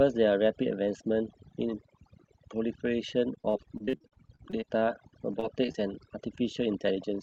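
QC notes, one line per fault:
throughout: overdone noise removal. The denoiser was pushed so hard that every frequency band near its noise estimate is pulled down or switched off, taking the quiet edges of the speech along with it. The background drops to near silence dotted with twinkling specks. On a spectrogram, the gaps between syllables go nearly black, sprinkled with isolated bright dots. Speech energy looks patchy and eaten away at its low-level fringes.
3.35–5.76 s: repeated packet loss (robotic sound). Across this 2.4 s stretch, the stream keeps losing or delaying packets. Each hole is patched by extending the last sound, and the next dropout arrives soon after, so the speech turns choppy with pieces missing. It sounds like a run of 22 separate gaps. The longest lasts 38 ms, about 455 ms in total is filled in, and about 320 ms is simply missing, so concealment covers 19% of the span. 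A spectrogram shows repeated smeared, stretched slices and brief blank strips. Within the Opus call path, the content tops out near 8 kHz.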